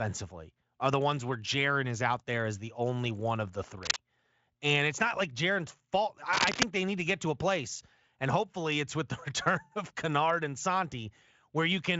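At 3.83 to 3.98 s, and again at 6.33 to 6.63 s, bursts of cable scratch noise cut across the speech. They sound like rough, uneven rustling, about as loud as the speech. A worn connector or cable being moved is the likely cause.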